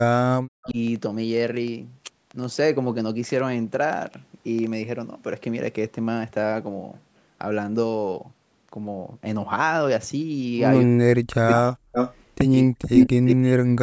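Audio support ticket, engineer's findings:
Train of clicks, 0.04–4.74 s. Ticking/popping over the speech and pauses, irregular spacing, about 6.2 clicks/s, roughly thirty in all, peaks about 5 dB above the speech. Likely cause: interference pickup or a faulty connection or power supply injecting near-identical pulses. Check cabling, grounding and nearby equipment.

Speech suppressed in double talk, 0.60–0.77 s (drop about 35 dB), 10.83–11.89 s and 12.63–13.83 s (drops about 40 dB, roughly a second each). Near-end speech dips and cuts out in pieces while the far end talks. Likely cause: the echo canceller fails to separate talker from loudspeaker echo and attenuates both.

Echo leak, five bursts. At 0.63–0.71 s the delay is 247 ms at about −25 dB. At 11.47–11.54 s and 11.92–12.15 s the delay is 312–315 ms at about −5 dB. At 12.94–13.08 s it is 321 ms, about 5 dB above the speech. At 13.27–13.35 s it is 322 ms at about −5 dB. 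These are delayed copies of the speech. Likely cause: the far-end loudspeaker echo is only partly cancelled and is sent back. The delay grows across the clip. The bandwidth limit, with nothing above 8 kHz, is normal call microphone processing.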